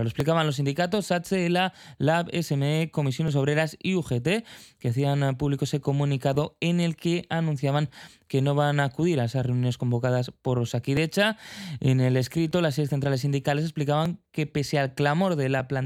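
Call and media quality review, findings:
Regular click/pop in the speech every 1.54 s, about ten of them, from 0.20 s to 15.60 s. Likely clock drift buffer slips: two free-running clocks about 1000 ppm apart let the buffer drift until roughly 70 samples are dropped or repeated.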